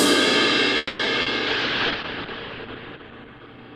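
At 0.77 s the sound stops moving forward. For about 0.22 s, until 1.01 s, the last bit of audio is stretched into a fading buzzy tail, then things pick up exactly where they left off. That's a call audio freeze, likely packets stuck in transit draining the jitter buffer, so nothing's lost but everything after runs 220 ms late.

Right after, there are two short concealed packet loss spots, at 1.05 to 1.08 s and 1.22 to 1.28 s. The decoder covers the holes by extending the previous sound, so you get a quick smear or wobble, and a tiny fragment can go missing before it blends back.

From 1.48 s to the end there's a call bitrate drop. The encoder got squeezed hard, which fits a fall from around 64 kbps to about 9 kbps, and the top end gets cut off at 8 kHz. It sounds dull, muffled and a bit watery, bottoming out for roughly the last second and a half.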